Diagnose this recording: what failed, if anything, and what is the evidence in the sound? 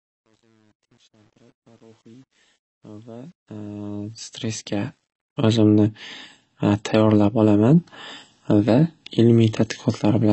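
The speech was likely encoded at a low bitrate with AAC compression in the codec stage, which fits AAC-LC at around 24 kbps. Nothing sounds above 8.1 kHz for the whole clip, and the codec damage is plainly audible as a dull, smeared, warbling texture.

The fade-in at the start was applied with too few bits and no dither, which fits a word length of about 9 bits. This truncation distortion on the fade runs from 0.0 to 5.47 s. It is worst up to 3.94 s, where the quiet, stepped waveform turns gritty before the level reaches full.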